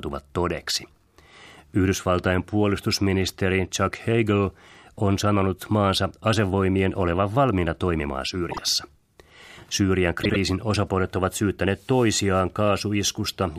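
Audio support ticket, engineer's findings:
Brief garbled flutter at 8.51–8.58 s and 10.23–10.36 s. Frames out of order in the decoder input: adjacent blocks of about 26 ms, then about 52 ms, played swapped. No time lost.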